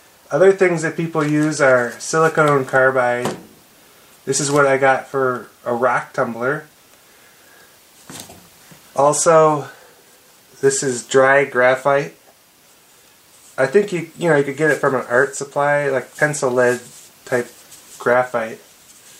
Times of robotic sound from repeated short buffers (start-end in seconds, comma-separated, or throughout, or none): none